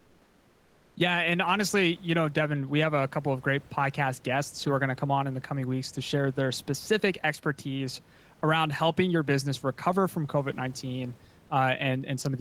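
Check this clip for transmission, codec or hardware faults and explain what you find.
One transmission fault stands out: comfort noise in place of the background, from 0.00 to 0.95 s. The room's real background, about 31 dB below the speech, is replaced by a steady, featureless hiss about 3 dB quieter, likely because discontinuous transmission, plausibly Opus DTX, paused sending while the sender heard no speech. A noise gate or dropout would leave silence, but here synthetic noise fills the gap.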